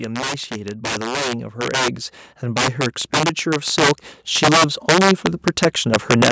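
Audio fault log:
Throughout: integer overflow. The speech is driven about 10 dB past full scale, and instead of being limited, every sample that exceeds the integer ceiling wraps around to the opposite extreme. A few percent of samples are affected, so the loudest syllables produce violent, sharp cracks that are harsher than clipping. On the waveform, peaks jump abruptly from the top rail to the bottom rail. On a spectrogram, each crack appears as a bright vertical broadband streak reaching up to the 8 kHz band edge.
0.48 to 5.3 s: automatic gain rising. The gain control judged the input too quiet and raised its gain steadily by about 13 dB over nearly five seconds. Speech and background noise swell together, so the background grows along with the speech. On the waveform, the envelope widens gradually across the span. On a spectrogram, the whole band, including the noise floor between phrases, brightens from left to right.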